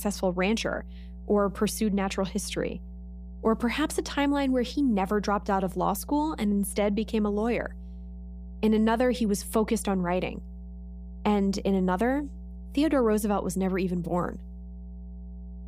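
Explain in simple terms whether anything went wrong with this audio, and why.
Yes, something went wrong: a steady low buzz of mains hum runs from start to finish under the speech. Power-line electricity at 60 Hz, likely picked up through a ground loop or nearby transformer, leaked into the recording and sits fairly loud beneath the speech.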